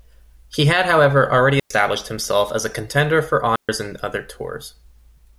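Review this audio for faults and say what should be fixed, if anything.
Two digital wireless dropouts interrupt the speech. The first runs from 1.60 to 1.70 s, a mute of about 107 ms between "had however already" and "himself as a contender". The second runs from 3.56 to 3.69 s, about 131 ms, between "as a contender for" and "in other". In each, the receiver lost too much data and muted with a very short fade, leaving a clean hole of near silence. The absence of a noise burst or hiss on either side is what separates this from an analogue wireless dropout. Preventing it means improving the radio link: shorten the transmitter-to-receiver distance, keep line of sight, and clear any interfering equipment from the channel.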